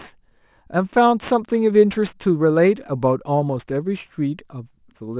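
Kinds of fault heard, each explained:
Aliasing: the speech sounds like it was dropped to a lower rate, which fits 24 kHz down to 8 kHz, with no filter first, so sibilant energy above 4 kHz folds back below it. The esses turn gritty and metallic, with aliases roughly 25 dB under the signal.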